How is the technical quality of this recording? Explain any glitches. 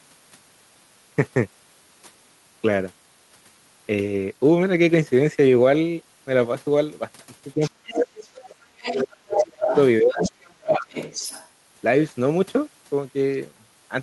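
The recording has two linked problems, both in the middle of the clip, where two people are talking at the same time.

Speech suppressed in double talk occurs from 7.55 to 10.21 s and again from 10.58 to 10.94 s. The talker's voice sinks, thins and breaks up into pieces, falling by roughly 30 dB at its deepest in the first stretch, with about two seconds of it affected in total, and by roughly 20 dB in the shorter second dip. The likely cause is an echo canceller that could not tell the local talker from the loudspeaker echo while both were active, so it turned everything down.

The other side's voice leaking through appears at 7.62 to 8.18 s, 8.83 to 9.77 s and 10.12 to 11.48 s. A second, fainter voice sits under the talker, at about 20 dB below the speech at first, then at about 5 dB below, which is nearly as loud, and then at about 10 dB below. This is likely the far end's voice, played on the talker's loudspeaker and picked up again by the microphone, that the echo canceller did not fully remove.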